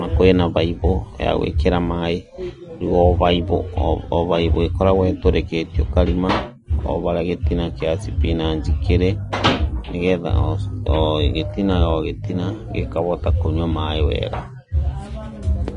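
From start to finish the speech has a hard ceiling at 10.6 kHz, and the top end sounds hissy and grainy, with blurred attacks. That's likely Vorbis compression at a low setting, fitting roughly 34 kbps, where fine treble detail gets coarsely quantised into noise.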